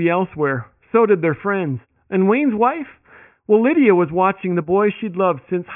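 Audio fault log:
No technical faults are audible in this speech recording.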